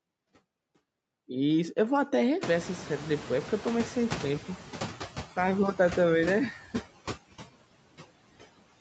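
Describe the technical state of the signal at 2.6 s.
At 2.6 s the noise suppressor is catching up. The room noise jumps by roughly 20 dB just before, and the suppressor's noise estimate lags behind. From 2.41 to 4.51 s the noise gets only about 7 dB of reduction. It sits about 12 dB below the speech, then sinks over about 2.1 s as the estimate adapts. Noise suppressor artifacts also run through the whole clip. The suppressor cuts noise bands frame by frame, by about 19 dB once settled. The noise sinks between the words and rises under them.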